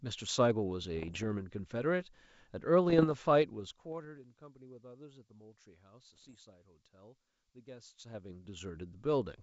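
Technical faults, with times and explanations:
0.97 to 1.26 s, 2.90 to 3.15 s and 6.14 to 6.35 s: bit errors on an ADPCM link. Short stretches of pops and rough, gritty bursts with brief jumps in level. A flipped bit throws off the decoder's step size and predictor, so each error keeps ringing for some milliseconds before the decoder settles back down. The error rate is low, under one percent.
7.76 to 8.84 s: zipper noise. The speech level changes by roughly 20 dB in coarse 3 dB steps, about seven per second, with no smoothing between them. Each step lands as a small click, which gives a ticking, zipping texture on top of the level change.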